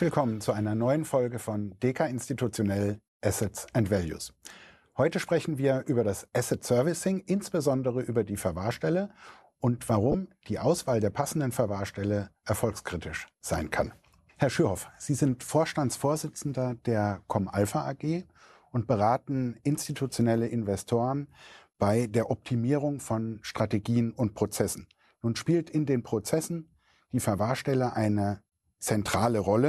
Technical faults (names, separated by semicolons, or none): corrupt frame decoded